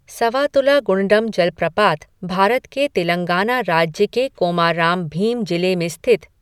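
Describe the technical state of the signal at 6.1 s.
At 6.1 s the speech signal is intact, with no audible technical fault at that moment.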